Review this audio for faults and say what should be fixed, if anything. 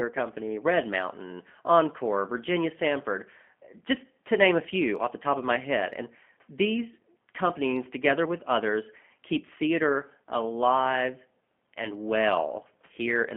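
Throughout, G.729 coding at what sounds like 8 kbit/s rebuilt the speech from sparse pulses, leaving it rough, synthetic and limited to 200 Hz to 3.4 kHz. Route the call over a wideband, higher-bitrate codec instead.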